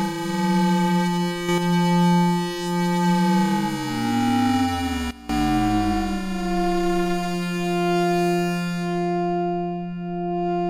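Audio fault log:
1.49–1.58 s, sudden gain jump: sound and background noise step up together by about 6 dB with no ramp, likely from a gain setting applied between consecutive samples.
5.11–5.29 s, sudden gain jump: level and noise floor drop together by about 17 dB in an instant, likely the same kind of unramped digital gain change in the opposite direction.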